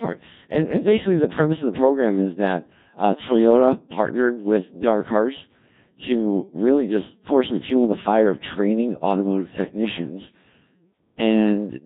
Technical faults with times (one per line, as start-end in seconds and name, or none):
0.00-11.86 Codec 2 vocoder